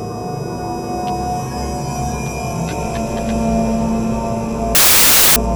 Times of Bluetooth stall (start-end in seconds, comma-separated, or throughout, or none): none